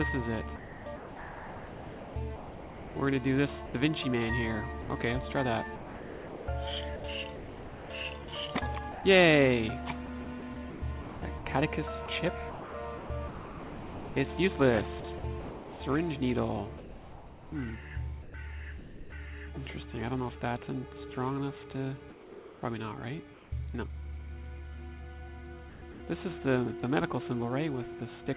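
From 0.56 to 19.12 s the sound keeps breaking up into flat, steady hiss, about 7.2 s of it in all. This is sound chopped by the voice detector, likely its repeated on/off switching. At 22.1 s the sound gives way to steady noise until 22.62 s, losing about 220 ms of real content. This is sound dropped by the voice detector, likely from quiet material being mistaken for background. From 22.1 to 23.52 s the background turns smooth and featureless for about 700 ms. This is comfort noise in place of the background, likely synthesized at the receiver during the transmission pause. At 25.7 to 26.0 s there is another short choppy patch of about 200 ms, again sound chopped by the voice detector. Throughout, nothing is heard above 4 kHz, which fits a narrowband call codec.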